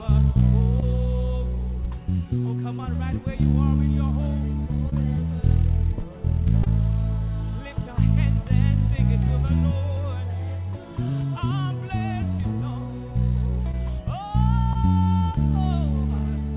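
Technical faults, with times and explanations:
0.80, 3.52, 4.90, 6.64, 13.71 and 14.73 s, short concealed packet loss: each time about 20 ms of audio arrived too late to decode, and the receiver bridged the gap by extending the preceding sound before fading back into the real signal. Each event is a brief smear or wobble lasting about 40 ms, heard within audio capped at 4 kHz by a telephone-grade codec. Unlike a true dropout or a click, there is no silence and no hard edge.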